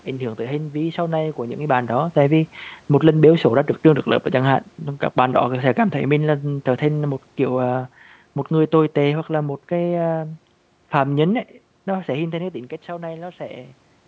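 From 1.65 to 7.88 s, speech and room noise sink together by about 7 dB: automatic gain falling, lowering gain on input it judged too loud or too noisy.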